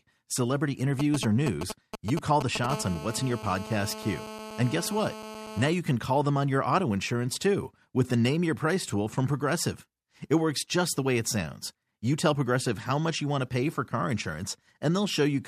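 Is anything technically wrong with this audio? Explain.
Yes, there is interference from a nearby 2G mobile phone, in two stages.

From 1.0 to 2.66 s there are GSM signalling bursts. A phone near the recording chain is exchanging short groups of radio transmissions with the network. Something in the audio circuitry rectifies that RF energy and turns it into audible sound. The result is an irregular, galloping dit-dit-dit of brief buzzes pulsing at 217 Hz. It sits roughly 5 dB below the speech.

From 2.70 to 5.68 s the phone is in a call, and the fault becomes a continuous GSM phone buzz. During a call the handset transmits in a steady train of bursts 217 times a second, and the circuit again demodulates them. The sound is a hard, raspy, harmonic-rich buzz at 217 Hz that runs steadily underneath the speech and has no relation to it. It sits about 13 dB below the speech, quieter than the signalling bursts but constant.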